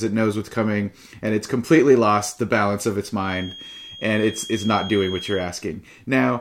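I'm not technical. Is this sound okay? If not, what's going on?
No. From 3.19 to 5.51 s, right after "the balance of its", there's a feedback whistle: a thin, steady high tone near 3.3 kHz behind the speech, likely a loudspeaker being picked up by the microphone. Unlike runaway feedback, it stays quiet and never builds into a howl.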